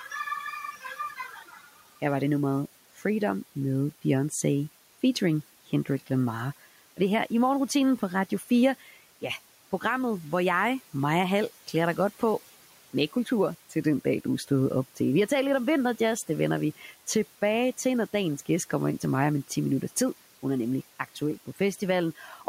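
Between 0.72 and 1.82 s, parts of the speech turn faint and swallowed, dropping by about 12 dB for roughly half a second in total, and again briefly at 8.3 to 8.5 s by about 9 dB. This is speech cut by the noise suppressor, which mistook quiet speech for the room noise sitting about 23 dB below it.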